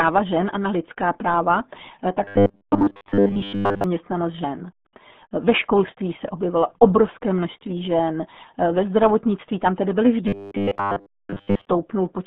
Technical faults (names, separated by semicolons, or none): RealAudio 14.4 codec; robotic sound from repeated short buffers